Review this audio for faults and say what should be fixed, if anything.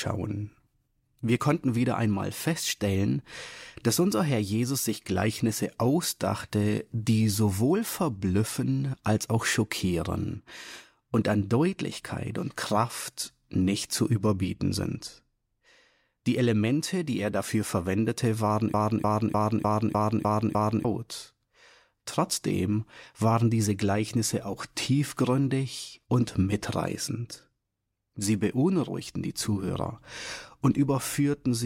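A broken-record loop runs from 18.74 to 20.85 s. A 0.30 s fragment repeats seven times back to back, and the audio that belonged there is lost. A waveform or spectrogram shows identical blocks tiling at exact 0.30 s intervals, likely from a stalled player, encoder or stream resending its last held fragment. To prevent it, add stall detection that resyncs or outputs silence instead of replaying stale buffered data.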